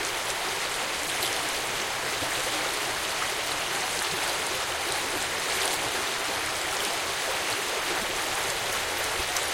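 Brief chirps or noise bursts of about 30 ms break the sound at 1.06, 2.21, 4.12, 5.42, 6.86, 8.01 and 9.18 s. They likely come from a broken MP3 bit reservoir: after lost frames of about 26 ms, the decoder reads borrowed bits from the wrong frame. Each burst shows on a spectrogram as a thin broadband smear and in the waveform as a jagged discontinuity.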